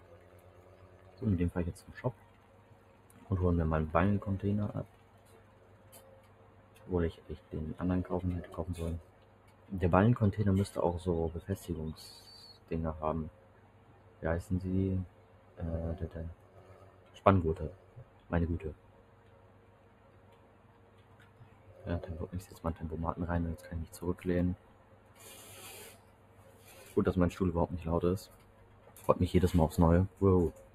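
From the start, channel delay causes comb filtering: one channel lags by a few samples, a fraction of a millisecond, so the mono sum notches from around 5 kHz upward and sounds hollow. Throughout, a noise suppressor applied to music or sounds pumps held material by roughly 20 dB, letting attacks through while sustains and tails thin out. The noise suppressor cuts sound by up to about 6 dB at 0.0–1.2 s, 2.14–3.19 s, 4.87–7.52 s, 9.03–9.69 s, 12.54–21.72 s, 24.57–26.67 s, 28.32–28.96 s and 30.09 s to the end, sinking steady passages.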